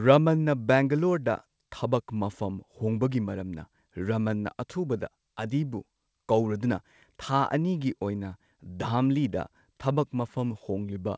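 The speech shows no technical faults, and its band-limited character, with nothing above 8 kHz, matches a wideband call path that points to a G.722 codec.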